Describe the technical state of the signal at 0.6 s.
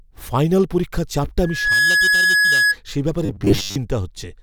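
At 0.6 s the speech signal is intact, with no dropout, clipping, glitch or other technical fault at that moment.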